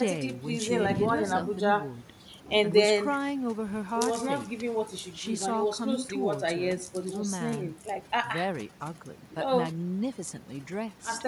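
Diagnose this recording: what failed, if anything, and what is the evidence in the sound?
Overdone noise removal in the processing chain, throughout: the background drops and breaks up into twinkling specks, and quiet parts of the speech are lost as their bands get gated away.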